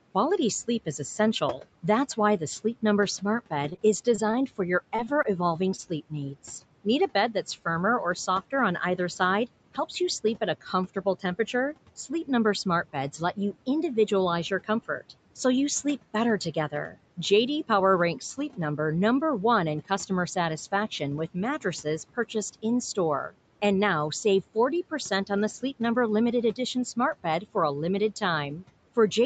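Noise suppressor artifacts run through the whole clip: frame by frame, the steady background is pushed down by about 18 dB, so the residue pumps between phrases.

Repeated packet loss (robotic sound) follows from 3.69 to 4.43 s. Six short gaps, none longer than 20 ms, are each patched by extending the preceding sound. Roughly 15% of the stretch is filled this way, and it sounds choppy.

Short concealed packet loss then occurs three times: from 4.96 to 5.00 s, from 5.22 to 5.26 s, and from 5.76 to 5.80 s. Each time about 20 ms of audio never arrives and is bridged with synthesised continuation, heard as a brief smear or wobble.

A short stall from a late packet falls between the first two of those, from 5.04 to 5.08 s. The jitter buffer runs dry and the last sound is held for about 22 ms until the packet arrives. Nothing is lost, but the sound is held too long, with a slight buzz or dip.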